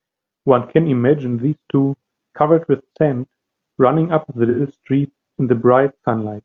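A speech clip with AAC frame loss and concealment: a run of compressed audio went missing near 4.49 s, and the decoder patched the gap from the last good spectrum. About 85 ms of audio is lost, consistent with two dropped frames, and it leaves a brief smeared, noisy patch until 4.60 s.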